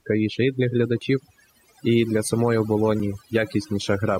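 From the start, overdone noise removal leaves the pauses almost silent apart from twinkling specks. The noise reducer cut bands near its noise estimate too hard, so a spectrogram shows a blotchy, hole-ridden background and ragged upper harmonics.

At 1.01 s, just after "і для", an overlap between stream segments produces a tiny skip. It happens again at 3.00 s after "і для самої". Overlapping 2-second segments were trimmed, deleting a few milliseconds, so the waveform shows an abrupt discontinuity at each join.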